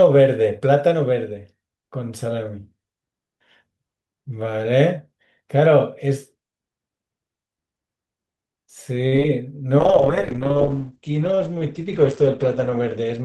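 From 9.07 to 9.25 s, repeated packet loss (robotic sound) strikes. Four gaps in quick succession, where packets went missing or arrived too late, the longest gap 46 ms. The receiver patched them by stretching the preceding sound, so nearly half this stretch is concealment. The speech turns choppy, with about 30 ms simply gone.

At 9.79 s a call bitrate drop begins and lasts to the end. The bandwidth estimate fell and the encoder went from 48 to 12 kbps, narrowing the coded band from 20 kHz to 8 kHz for about three seconds. The speech sounds muffled, rough and watery.

From 12.85 to 13.22 s, a jitter buffer speed-up overlaps that low-rate stretch. Excess buffered audio made the receiver cut short pitch-period pieces, roughly 40 ms in total. Playback runs at 109% speed with pitch unchanged, so the speech sounds hurried.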